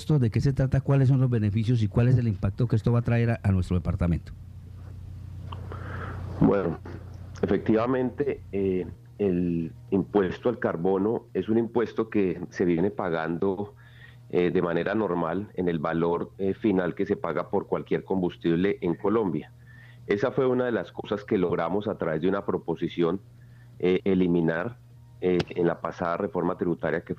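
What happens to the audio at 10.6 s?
Nothing goes wrong at 10.6 s; the audio plays through that moment intact, with no dropout, click or distortion.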